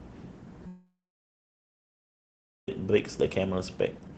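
From 0.67 s the speech trails into a fading buzz, then silence until 2.69 s. This is likely a long network dropout, with two seconds of audio lost.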